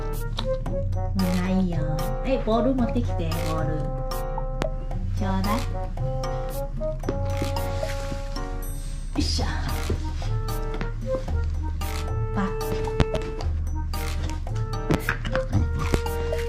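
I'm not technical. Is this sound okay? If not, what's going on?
No. The clip has loud pops. There is one at about 4.62 to 4.65 seconds, a double pop from 13.00 to 13.19 seconds, one at 14.94 to 14.97 seconds, and one at 15.94 to 15.97 seconds. Each is a sharp snap, much louder than the sound around it. The sound keeps going underneath. The likely cause is a sudden electrical jolt from a plug, a switch, static or a driver hiccup.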